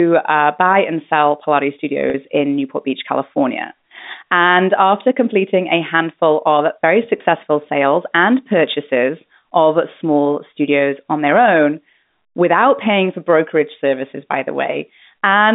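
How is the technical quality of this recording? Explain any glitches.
There are two short dropouts in the line, both packet loss with pitch repetition. At 2.10 s about 40 ms goes missing, which fits two lost packets. At 7.18 s a 20 ms gap, likely one packet, falls between "a handful of very" and "sales and purchases of". Each time the receiver fills the hole by looping the last pitch period, so you get a brief held, slightly buzzy tone. The G.711 phone band underneath stays narrow but clean.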